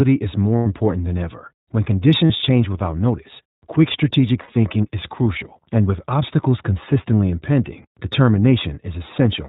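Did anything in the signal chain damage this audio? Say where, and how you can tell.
Yes. At the codec stage, the whole clip has been through the iLBC codec. The speech is band-limited with nothing above 4 kHz and has a plainly audible rough, slightly synthetic edge. That fits iLBC's 15.2 kbps mode coding each 20 ms frame independently.

At the network stage, there are three spots of lost iLBC frames. The first runs 0.57 to 0.67 s (100 ms) before "important than ever". The second runs 2.26 to 2.32 s (40 ms) before "change without notice quick". The third runs 4.42 to 4.50 s (60 ms) between "without notice quick strategic" and "is crucial and with". Each sounds like a held, buzzy vowel as the decoder repeats the last pitch cycle with noise, and the voice recovers right after.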